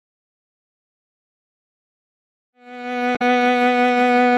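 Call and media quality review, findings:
Damaged data in compressed stream, 3.12–3.22 s, music: brief glitch, inside the smooth fade-in. Decoder hits corrupt frames, loses sync, resyncs at next header. Unlike a plain dropout: caused by misread frames, not missing signal.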